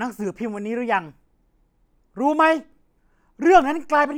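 No technical faults can be heard anywhere in this speech recording. There are no events to place in time.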